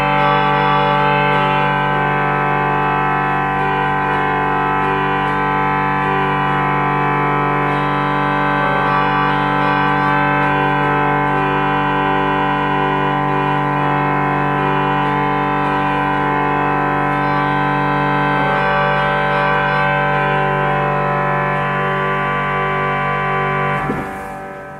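Nothing is technically wrong with this audio.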